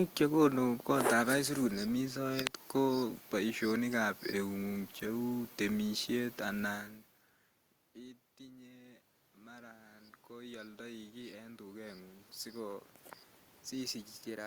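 From 7.93 s to 12.89 s there is automatic gain rising. After the talker moved back from the microphone at around six and a half seconds, the input fell by about 24 dB. The gain control then read the speech as too quiet and lifted its gain by about 10 dB over roughly five seconds. Voice and room noise swell up together as the gain climbs.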